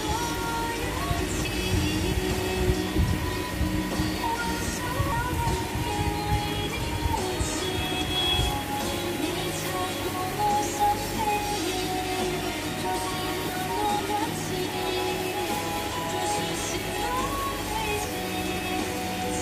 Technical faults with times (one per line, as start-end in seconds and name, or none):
1.45 dropped buffer (overrun)
2.94 dropped buffer (overrun)
5.12 dropped buffer (overrun)
8.23 dropped buffer (overrun)
13.99 dropped buffer (overrun)
18.56 dropped buffer (overrun)